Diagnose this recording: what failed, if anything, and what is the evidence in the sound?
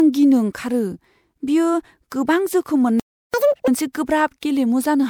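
Codec stage: the speech has a swirly, hollow, smeared quality with softened consonant attacks, most likely generation loss from about three successive MP3 encodes at 128 kbit/s. On a spectrogram, content stops near 21 kHz and blotchy holes scatter through the upper bands.

Playback stage: the speech cuts out completely from 3.00 s to 3.34 s, a gap of 0.34 s, then resumes. The waveform shows a flat line of digital silence there, and the spectrogram an empty vertical band. This points to a playback stall, likely a starved buffer or a blocked player thread.

Playback stage again: straight after the gap, from 3.34 s to 3.68 s, the speech runs at 2.0 times normal speed and rises roughly ten semitones before dropping back. This is catch-up at higher speed. The player resampled its backlog to recover the lost time. On a spectrogram, the harmonics jump upward and squeeze together horizontally.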